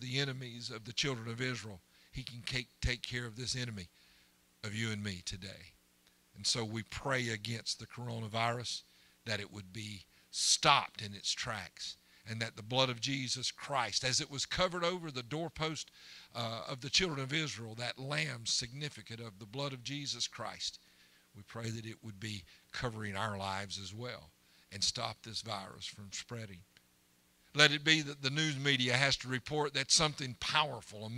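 At about 21.64 s the whole recording abruptly steps up in loudness by about 5 dB, with the sound and its background noise rising together in a single instant rather than swelling, and the raised level persists until about 21.76 s. This is a sudden gain jump: the digital gain most likely changed between one sample and the next, as happens when a new level setting or bit shift is applied with no ramp to smooth the transition.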